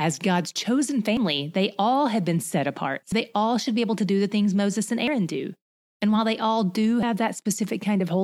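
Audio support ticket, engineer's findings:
Audio missing between chunks: likely a chunked recorder or processor dropping samples at each 2.0 s boundary. Speech jumps forward at 1.17, 3.12, 5.07 and 7.03 s, each time losing roughly 50 ms, with the two sides spliced together without a gap.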